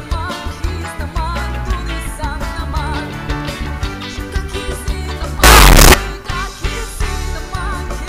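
Signed and unsigned mixed up, 5.44 to 5.94 s: a burst of very loud, harsh distortion where quiet moments blast as loud as everything else, likely from 8-bit samples read with the wrong sign convention.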